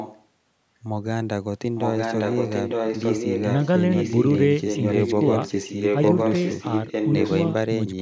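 A faint echo leak is there right from the start, 0 to 0.25 s, then louder from 1.75 to 3.66 s, 3.92 to 4.4 s and 4.63 to 7.48 s: a copy of the speech trailing about 0.91 s behind, likely a loudspeaker-side echo canceller letting the far end's own audio back through.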